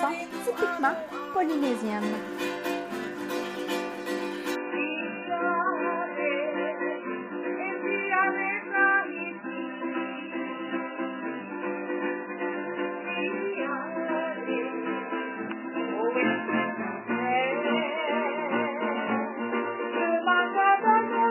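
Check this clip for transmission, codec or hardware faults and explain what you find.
One fault is present: an adaptive stream at a lower bitrate. At 4.55 s the quality drops suddenly and stays low to the end. There is no gap. The stream has switched to a much cheaper version, as players do when the connection slows. Nothing remains above 3 kHz, so the treble is gone. Coding artefacts rise sharply and the sound turns thin and smeared. This points to a fall from roughly 128 kbit/s MP3 to about 8 kbit/s.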